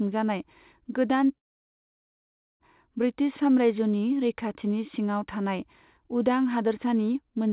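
At 1.38 s the speech breaks off. A fading buzz carries the last sound briefly, then near-silence holds until 2.62 s. This is likely a long network dropout. About 1.2 s never arrived. Speech resumes past the gap, band-limited below 4 kHz.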